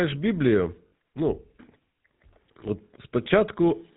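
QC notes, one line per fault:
Throughout: GSM full-rate codec. The sound has the plainly audible buzzy, gravelly roughness of a vocal-tract model driven by evenly spaced pulses from a thinned excitation signal. Nothing passes above 4 kHz, which fits the 13 kbps full-rate coder.
0.88–0.92 s and 3.24–3.27 s: lost GSM frames. About 40 ms and then 20 ms of sound are replaced by the last good frame's settings, repeated. This produces a brief rough, metallic ring. Neither gap lasts long enough to fade to silence.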